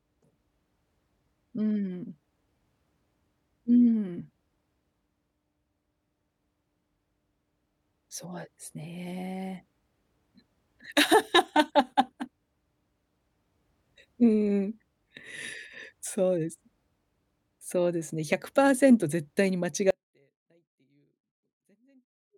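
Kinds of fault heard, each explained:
Audio dropout to a faint residue: the speech cuts off abruptly at about 19.9 s and never comes back, running right to the end of the clip. What's left isn't true silence: a faint sound hangs on, something like 40 dB below normal level. That hard edge, rather than a pause or fade, points to the wanted feed being lost while the path downstream stayed open, likely a broken connection or source upstream.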